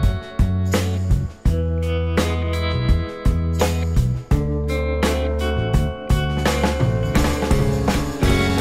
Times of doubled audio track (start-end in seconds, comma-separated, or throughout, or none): 7.03-8.60